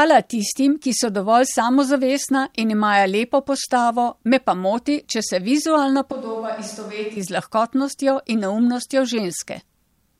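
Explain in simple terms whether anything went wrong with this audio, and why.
Right after "moti če se vizualna", from 6.12 to 7.17 seconds, the speech suddenly turns hollow and roomy, thinner in the bass, noticeably quieter, and with more background noise, then snaps back. This is a switch to a distant microphone, likely because the close microphone dropped out briefly.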